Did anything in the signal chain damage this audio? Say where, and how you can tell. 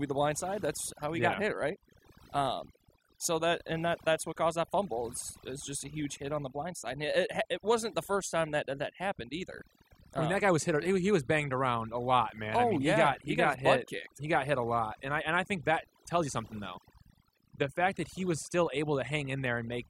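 Yes, overdone noise removal throughout the speech: over-aggressive noise reduction gates bands near its noise estimate, leaving twinkly near-silent gaps and taking quiet parts of the voice with them.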